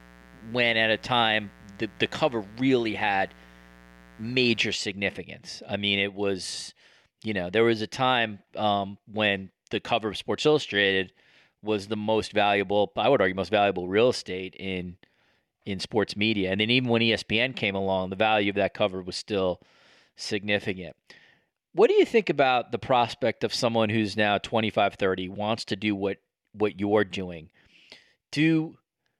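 Unshielded wiring, a dimmer or a rectifier has let sharp switching spikes from a 60 Hz supply into the signal path from the start of the speech until 4.75 s, producing mains buzz. Because the spikes arrive twice per cycle, they carry a dense stack of 60 Hz harmonics reaching several kilohertz. The result is a steady, raspy buzz sitting roughly 25 dB below the speech before it stops.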